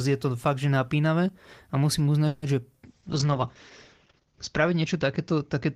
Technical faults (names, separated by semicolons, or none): call audio freeze; short concealed packet loss; call bitrate drop